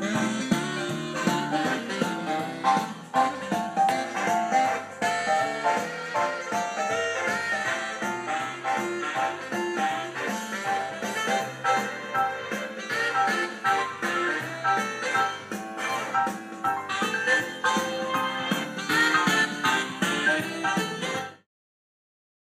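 No faults here; the closing fade-out is smooth.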